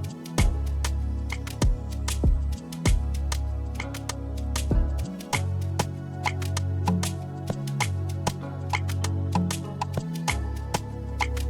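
No technical faults can be heard anywhere in this audio.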